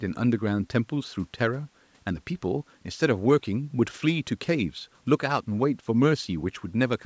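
No technical faults can be heard in the speech. The call microphone processing is audible in the trimmed lowest bass and in content that stops at about 8 kHz, which is expected for that path.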